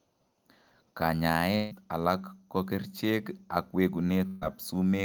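A long network dropout is the likely cause of the break from 1.55 to 1.73 s. For about 150 ms the speech turns into a drawn-out, fading continuation of the last sound rather than true silence, because the receiver was filling the gap with what it had already played. When the speech returns it has skipped ahead, and roughly 160 ms of the original is simply gone.

A burst of packet loss follows from 4.27 to 4.43 s. Here a run of audio failed to arrive in time, so the receiver extended the preceding sound for about 145 ms, lowering its level as the gap went on. Playback then resumes further along, with about 140 ms of speech missing from the middle.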